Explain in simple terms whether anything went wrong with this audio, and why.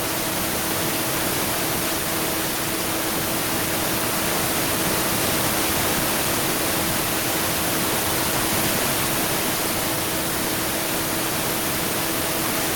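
Throughout the speech you can hear echo with no canceller: the far end's loudspeaker feeds back into their mic, so every phrase returns quietly about a tenth of a second later.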